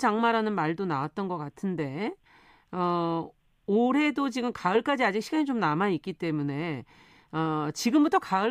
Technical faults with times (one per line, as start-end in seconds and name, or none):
none